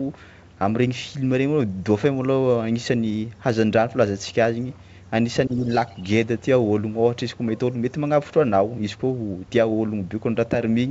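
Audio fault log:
5.47–5.68 s, speech suppressed in double talk: for about a fifth of a second the voice sinks by roughly 10 dB while the other party is talking, then recovers. It is a brief dip, not a clean dropout to silence. The likely cause is the echo canceller turning down the whole mix when it cannot tell the local talker from the loudspeaker echo.
5.86–6.03 s, other side's voice leaking through: a faint scrap of a second voice sits far below the talker, at about 35 dB down. It is a different voice, not a delayed copy of the talker as in room echo, and likely comes from loudspeaker sound the echo canceller left in the microphone signal.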